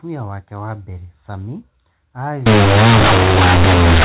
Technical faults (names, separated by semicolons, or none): companded audio read as linear